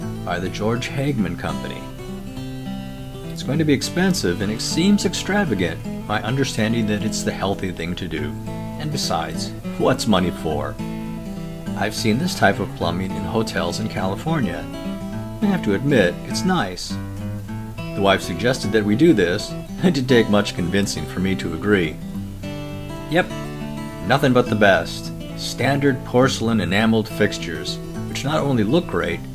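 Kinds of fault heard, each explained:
No faults can be heard anywhere in the recording.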